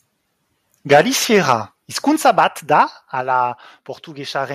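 Microphone overload hits this speech at 0.91–1.01 s, 1.34–1.53 s, 2.25–2.44 s and 2.73–2.81 s. The peaks are flattened with a harsh crackle, about 7, 5, 2 and 1 dB over full scale. That is likely from input gain set too high for the converter. Microphone volume stepped down at 0.93 s (about 2 dB), 2.16 s and 3.21 s (about 4 dB each). Voice and background drop together, likely as the call software cuts the device's input level after sensing overload.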